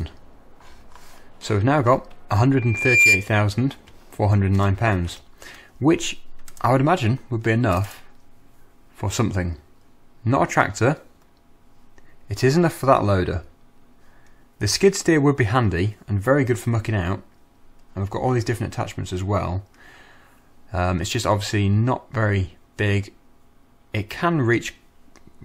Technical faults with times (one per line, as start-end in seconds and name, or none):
2.57-3.29 loudspeaker feedback squeal